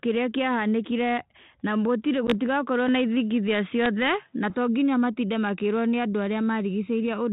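Right after "kĩrĩa kĩahanĩkire na gũtirĩ", packet loss on an ADPCM call at 2.27 to 2.33 s leaves a hard-edged 10 ms hole, which fits a single lost packet. Unlike a dropout, the speech then returns slightly distorted as the decoder's predictor recovers.

From 2.89 to 4.5 s, ending just before "to nginya matinde makĩrwo", the sound turns narrower and boxier, cut off above 3.8 kHz, with no gap and no clear change in level. The likely cause is an input switched to a poorer device. It differs from a codec change because its own faint background noise, about 45 dB below the speech, comes with it. The G.726 coding at 32 kbit/s stays lightly marked throughout.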